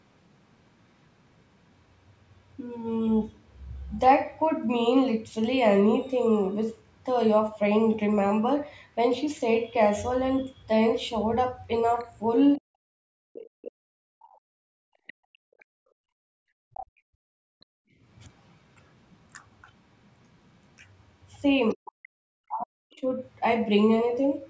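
Speech recorded on a call, with three kinds of echo-canceller trouble. Bandwidth stops near 8 kHz. The first fault is the other side's voice leaking through. A second voice appears at 11.99–12.04 s, 14.2–15.65 s, 16.74–16.86 s and 21.69–22.08 s. It is faint at first and strongest around 16.8 s. The cause is likely loudspeaker playback reaching the microphone. The canceller did not fully subtract it, so remnants slip into the talker's channel.

The second fault is speech suppressed in double talk. From 12.58 to 14.88 s and from 21.74 to 23.05 s, the talker's voice drops sharply, in pieces. The dips are very deep, about a second and a half in total each time. Both moments overlap leaked far-end speech. The canceller likely saw both sides active at once and could not separate them. So it attenuated everything, including the wanted talker.

The third fault is background gated by the echo canceller. 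From 15.16 to 17.99 s the room sound sinks by up to about 40 dB. It stays down for roughly three seconds, then returns. This happens while the loudspeaker plays far-end audio. The canceller clamps the microphone hard during that playback. When the playback ends, it releases and the ambience comes back.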